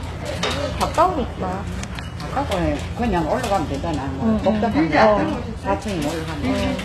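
HE-AAC compression runs through the whole clip, with plainly audible damage. Nothing reaches above 12.3 kHz, and the treble below that line has a bright but synthetic, gritty, metallic sheen that doesn't match the body of the sound. This is likely spectral band replication: only the lower band is coded, and the top is rebuilt from copied lower bands under a coarse envelope. The harshness fits a very low bitrate, around 16 kbps.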